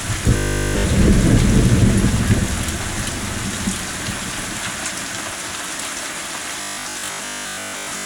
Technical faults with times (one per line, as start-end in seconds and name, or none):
0.37-0.89 robotic sound from repeated short buffers
6.61-8.05 robotic sound from repeated short buffers